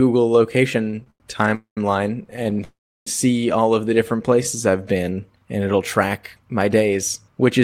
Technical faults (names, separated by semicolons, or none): repeated stalls (stutter); call audio freeze; jitter buffer slow-down; jitter buffer speed-up